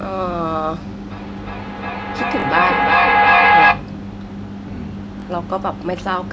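From 1.11 to 3.97 s the speech is caught in a feedback echo between two devices. A second device in the same room plays this call aloud, and the first microphone picks it up again. Its echo canceller only removes sound from its own loudspeaker, so the returned audio passes straight through. Each syllable comes back roughly every 0.4 s, thinner and more ringing with each pass. At its loudest the loop runs about 10 dB above the speech, so the repeats pile up instead of fading. Room reverberation, by contrast, smears sound continuously rather than returning it at a fixed, regular spacing.

At 2.4 s, inside that echo, there is a repeated buffer. Fresh audio arrived late, so the device played the previous 20 ms block a second time, joined hard at each edge. With a block this short it comes across as a click or a brief buzz rather than an audible stutter. The same fault recurs at 5.2 s. It differs from a dropout because a dropout leaves a gap of silence. 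Here the gap is filled with a copy of the audio just heard.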